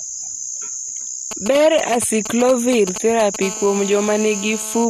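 From 1.31 to 3.36 s, GSM signalling bursts break into the speech. A nearby 2G phone sends short groups of radio bursts while signalling. The audio circuit rectifies them. The result is a galloping dit-dit-dit of brief 217 Hz buzzes, roughly 10 dB below the speech.

At 3.42 s a GSM phone buzz takes over and runs to 4.85 s. The phone is now in a call, transmitting bursts 217 times a second. Rectified, they give a steady, raspy 217 Hz buzz with many harmonics, about 16 dB below the speech.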